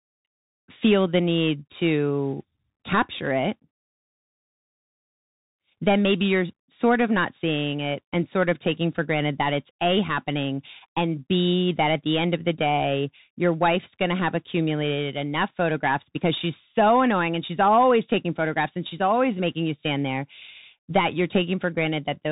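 Throughout the clip, the speech carries Bluetooth CVSD headset codec damage. Nothing passes above 3.8 kHz, so the top end is gone. One-bit delta coding with an adapting step leaves scratchy s sounds and a granular hiss, which fits a 64 kbps link.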